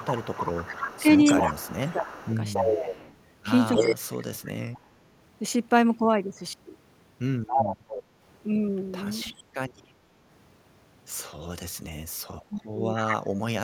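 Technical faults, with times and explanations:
0.00–3.15 s, echo leak: likely an echo canceller at a loudspeaker end letting its microphone pickup through, so a copy of the speech returns 280 ms late, about 5 dB below it.
0.74–2.94 s, speech suppressed in double talk: with both sides talking, the canceller likely turned the talker down too, so the speech dips by up to about 15 dB over roughly a second in total.
3.73–4.78 s, echo leak: likely the same incomplete cancellation, now returning the 280 ms delayed copy at about the same level as the speech.
3.75–4.67 s, speech suppressed in double talk: likely mistaking the talker for echo, the canceller cuts the speech in pieces, dropping up to about 30 dB over roughly 0.7 s.
7.47–8.03 s, echo leak: a late copy of the speech, 280 ms behind and about as loud, likely from residue the canceller failed to remove.
9.06–9.44 s, echo leak: a faint return of the speech, about 25 dB down at 280 ms delay, likely a small leftover the canceller missed.
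12.49–13.63 s, speech suppressed in double talk: during simultaneous talk the canceller likely attenuated the talker, dropping the speech up to about 30 dB in pieces totalling roughly 0.7 s.
12.96–13.17 s, echo leak: a brief 280 ms delayed copy about 5 dB below the speech, likely from incomplete echo cancellation.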